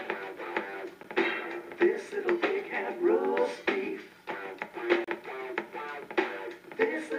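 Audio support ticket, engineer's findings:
Gap at a join of encoded pieces, 1.03 s (13 ms) and 5.04–5.08 s (32 ms), 4 s apart: separately encoded segments joined untrimmed, with encoder delay and end-frame padding left in.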